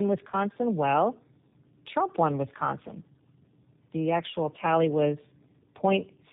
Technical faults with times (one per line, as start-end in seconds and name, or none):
0.00-6.33 tandem speech coding